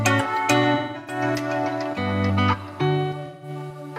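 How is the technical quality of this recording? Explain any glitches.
The recording has two dropouts from AAC frame loss with concealment, at 0.74–1.23 s and 3.25–3.49 s. In the first, about 0.3 s of audio is missing, scattered across the patch, with the longest gap around a fifth of a second. The second loses about 0.17 s. The decoder fills each gap by repeating the last good spectrum with randomised phase and decaying energy. This turns the sound smeared and noisy, sagging during the longer run before recovering.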